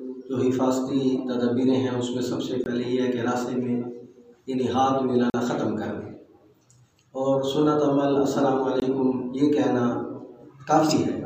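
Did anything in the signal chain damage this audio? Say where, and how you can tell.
Yes. There are three blocks of digital silence from the driver or buffer stage, at 2.64–2.66 s, 5.30–5.34 s and 8.80–8.82 s, lasting 20, 40 and 20 ms. Each is heard as a tick or brief hole. The waveform drops to a flat line with vertical edges and no fade. On a spectrogram, each gap is a clean blank column with hard edges. This points to output buffers not being filled in time.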